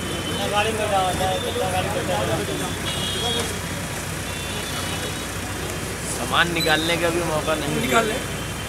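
No technical faults can be heard anywhere in the audio.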